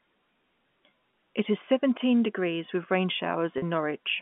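At 1.11 to 1.13 s and again at 3.58 to 3.62 s, packet loss with pitch repetition bridges 20 ms and then 40 ms gaps, which fits losing two and then four 10 ms packets. The receiver loops the last pitch period and fades it, so each gap sounds like a briefly held, buzzy tone, longer at 3.58 s. A waveform shows identical repeating cycles shrinking in level. A spectrogram shows frozen, flat harmonic lines within the 150 Hz to 3.4 kHz telephone band.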